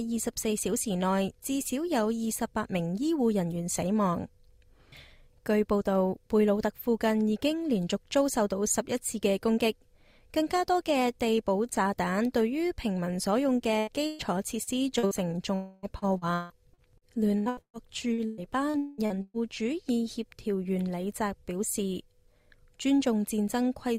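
At 13.79 to 13.90 s and again at 14.07 to 14.22 s, the sound turns into a held, fading continuation of itself before jumping ahead. These are bursts of packet loss: about 80 ms and then 120 ms of audio never arrived in time. The receiver stretched the last sound to cover each hole, turning it down as it went, and resumed later with that stretch missing.

Three brief smears follow, at 14.63 to 14.70 s, 14.99 to 15.06 s and 15.07 to 15.14 s, the last two almost back to back. Each is short concealed packet loss, where roughly 40 ms went missing. The decoder patched each gap by extending the preceding sound and blending back into the real signal, so anything short that fell in those gaps is lost.

From 15.55 to 15.86 s a longer stretch of about 280 ms is replaced by a continuation that buzzes or hisses and fades without ever dropping to silence. The sound then picks up further on. This is likely a long network dropout, with nothing reaching the receiver for that span and the concealment carrying the sound across the whole hole.

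From 15.99 to 19.37 s the audio becomes choppy. This is repeated packet loss, with 18 separate gaps scattered across those 3.4 seconds. The longest gap runs about 200 ms, and about a third of the span is filled in rather than real. Each hole is patched by extending the last sound, and the next one arrives soon after, so pieces keep dropping out.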